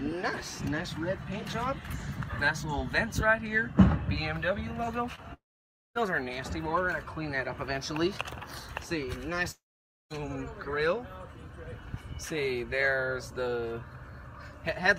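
At 5.15 to 5.19 s there is a short concealed packet loss. About 20 ms of audio never reached the decoder in time, so the receiver extended the preceding sound across the gap and blended back into the real signal, leaving a brief smear.

At 5.33 s the sound breaks off, trails for a moment as a fading continuation, then falls silent for about 0.56 s. It resumes at 5.97 s with roughly 0.62 s gone, likely a long network dropout.

A second break runs from 9.51 to 10.12 s, with the same brief fade followed by about 0.52 s of silence. Around 0.6 s of audio is lost, and this too is likely a long network dropout.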